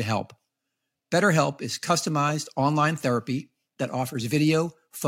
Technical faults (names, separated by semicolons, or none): none